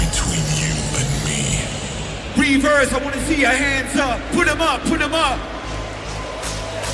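No technical faults can be heard anywhere in the clip. Nothing in the audio points to a dropout, glitch or other problem in how it was captured or delivered.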